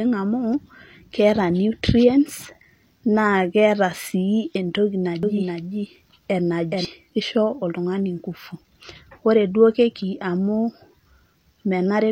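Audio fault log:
5.23–6.85 s doubled audio track: after "keeta sii entoki", a dry copy lags about 0.4 s, some 5 dB quieter, likely from a slower second capture; spectrogram patterns repeat with abrupt edges.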